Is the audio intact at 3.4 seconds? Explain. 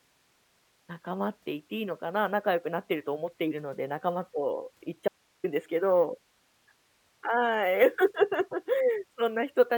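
Yes, at 3.4 seconds there is no dropout, click, distortion or other fault.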